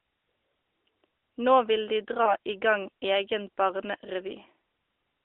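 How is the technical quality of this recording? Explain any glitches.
There is one glitch, a case of lost AMR speech frames at 2.24 to 2.36 s. The audio comes through a narrowband mobile channel limited to roughly 300 Hz to 3.6 kHz. Around 2.24 s the decoder lost a frame, consistent with one missing 20 ms frame, and bridged it by repeating the previous pitch and vocal-tract settings at reduced gain. You hear a brief dip or warble rather than hard silence or a click, which distinguishes concealment from a plain dropout.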